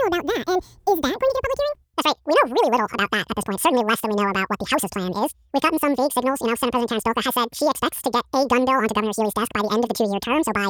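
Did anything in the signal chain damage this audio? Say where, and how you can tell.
Yes. The fault sits at sample-format conversion: the audio was read two samples at a time (double speed). For the whole clip, speech runs twice as fast and a full octave (12 semitones) high. Unlike a pitch shifter, tempo and pitch move together.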